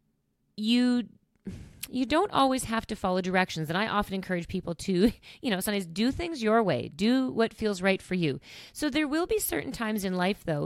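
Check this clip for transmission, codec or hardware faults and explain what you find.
No faults detected in this speech recording.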